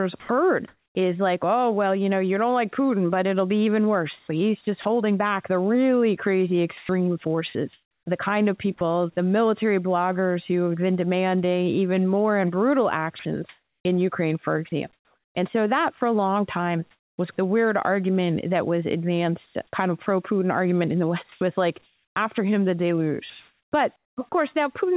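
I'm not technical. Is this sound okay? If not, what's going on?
No. Right at the start, from 0.2 to 0.29 s, there is sound dropped by the voice detector. The call's speech detector likely mistook a quiet bit of speech for background and stopped sending, so about 80 ms of speech is replaced by plain hiss.

Comfort noise in place of the background runs from 0.2 to 0.95 s. While nothing was being sent, the receiving end likely filled the gap with artificial, even-sounding noise standing in for the real room sound, which loses its natural texture.

Sound chopped by the voice detector occurs at 4.19 to 4.85 s, 6.77 to 8.81 s, 13.19 to 17.18 s and 19.46 to 24.32 s. The detector likely kept switching sending off and on, so soft syllables and word edges drop out into hiss, making the speech choppy. The phone-style line also carries nothing above 4 kHz, giving the speech a narrow, telephone sound.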